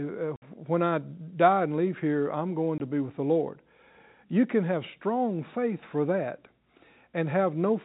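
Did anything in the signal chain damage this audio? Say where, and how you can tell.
Yes, at the network stage: packet loss filled with silence. The sound drops to dead silence at 0.36–0.42 s (60 ms, fitting three 20 ms packets) and at 2.78–2.80 s, between "leave here I'm going" and "to be with the". The waveform shows flat gaps with hard edges, and the spectrogram shows clean vertical blank bands.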